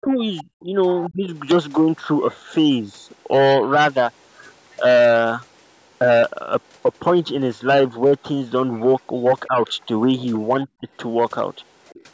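From the start to 0.74 s the speech dips in pieces, by as much as about 20 dB, for roughly a third of a second in total. This is speech suppressed in double talk. The likely cause is an echo canceller that heard both sides at once and turned the talker down with the echo. Inside that stretch, from 0.38 to 0.43 s, a faint second voice slips through, about 20 dB below the speech. That is the other side's voice leaking through, likely because the canceller left some loudspeaker sound in the microphone signal.

From 1.03 to 1.09 s another scrap of that voice leaks in, again about 20 dB down. Overlapping its end, from 1.08 to 1.28 s, the talker drops by up to about 25 dB, a second double-talk suppression. At 4.71 to 4.76 s a very faint leak appears, around 35 dB below the speech.

From 9.48 to 9.58 s the speech sags only slightly, about 5 dB. From 10.66 to 10.88 s it cuts much harder, near 25 dB, for about a tenth of a second.

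From 11.87 to 12.03 s a last fragment of the other voice leaks through, about 30 dB down. It is faint.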